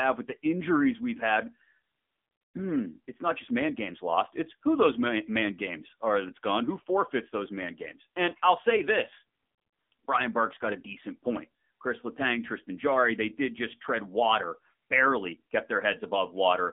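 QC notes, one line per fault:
Throughout: AMR narrowband mobile codec. The speech is squeezed into a phone band of roughly 200 Hz to 3.5 kHz, with nothing above 3.6 kHz. The modelled vocal tract gets few bits, so it sounds plainly buzzy and synthetic, which fits a low mode around 7.4 kbps.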